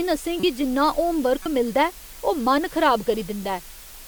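Throughout, the speech has been reduced to low bit depth with dither, consistent with about 6 bits. Dither turns the rounding error into a steady, even hiss roughly 20 dB below the speech. At 0.40 s, just before "गी जिन्ना", a corrupt frame was decoded. Damaged data was played as it was, putting energy at the wrong frequencies for 36 ms, which points to a couple of frames. It is heard as a chirp, squeak, blip or burst of noise. The same corrupt-frame fault returns at 1.42 s as another 36 ms burst, this time pointing to a single frame.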